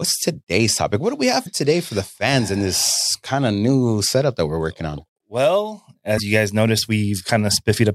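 At 1.43 s, right after "do we have" and before "today for the fans", a brief glitch lasting about 40 ms breaks into the speech, and a second one follows at 6.15 to 6.20 s, just before "you guys". Both come from damaged data in a compressed stream: corrupted bytes make the decoder misread those frames and lose sync until it finds a valid frame header. On a spectrogram each appears as a narrow vertical disturbance, and the waveform shows a short break in the surrounding speech.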